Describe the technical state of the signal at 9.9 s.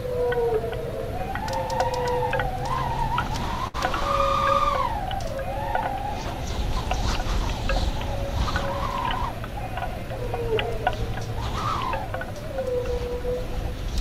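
At 9.9 s the jitter buffer, holding more audio than its target, is in a speed-up that runs from 9.31 to 10.04 s. Short pitch-period slices, about 40 ms in all, are cut out, so the sound plays roughly 4% faster at unchanged pitch.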